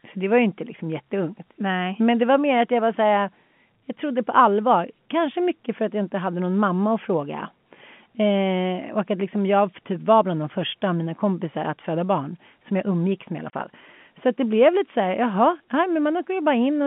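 At 13.5 s, right after "umgicks med i alla", the speech drops into a 30 ms hole of packet loss filled with silence, which fits a single lost packet. The receiver played nothing in its place, so the gap is silence with abrupt edges. Concealment would instead smear or repeat the preceding sound. The speech is carried in the narrow telephone band of the G.711 coding.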